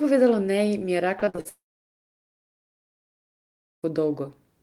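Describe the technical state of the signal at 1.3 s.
At 1.3 s the speech turns choppy, with a stuttering quality and bits of sound missing. This is repeated packet loss (robotic sound), running from about 1.19 to 1.47 s, right after "mi je". About five short dropouts follow one another, the longest around 46 ms. Each is patched by stretching the preceding sound, so roughly half of this quarter-second is filled-in continuation rather than real signal.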